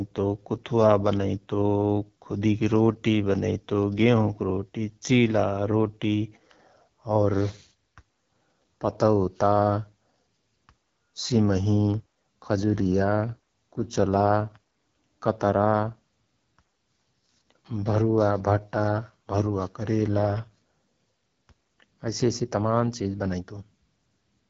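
From start to finish the speech carries the mark of the AMR wideband (HD Voice) codec, and the roughness points to one of its lowest modes, which fits an 8.85 kbit/s rate. The coder rebuilds the voice from a vocal tract model excited by sparse pulses, so at this rate the voice sounds rough and raspy. On a spectrogram, energy stops sharply at about 7.6 kHz, harmonics look smeared, and the top band holds diffuse noise rather than structure.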